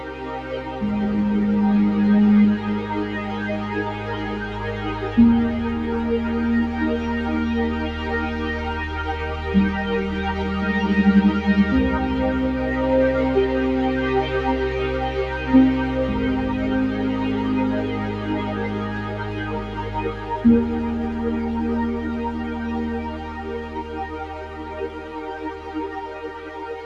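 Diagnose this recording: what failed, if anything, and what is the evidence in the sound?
Throughout the clip, sustained parts sink while onsets punch through, so the sound pumps and thins, with level swings of around 5 dB. This is call processing: a noise suppressor built for speech, applied to music or sounds, treats steady tones and decaying tails as noise and pulls them down.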